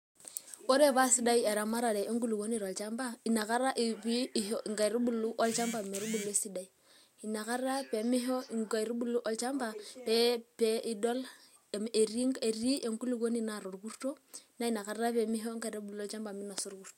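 Resampler restarted on every block, from 14.66 s to the end at 16.98 s: each 10 ms block was converted from 48 kHz to 44.1 kHz in isolation, leaving a small error at every edge, heard as a 100 Hz buzz riding on the speech.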